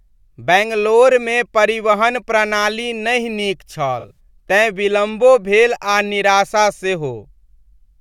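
AAC frame loss with concealment occurs between 3.99 and 4.19 s. Several coded frames went missing, totalling about 107 ms of audio scattered over roughly 170 ms, with no single gap longer than about 40 ms. The decoder patched each hole by reusing the last good spectrum with randomised phase, so instead of dropouts the speech turns briefly smeared, hissy and phasey, a short rough patch.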